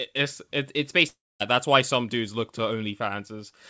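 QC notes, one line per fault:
1.08–1.42 s, long network dropout: audio likely stopped arriving for 0.32 s, so the receiver stretched the last sound into a fading buzz, leaving 0.23 s of near-silence before the speech resumes with that stretch gone.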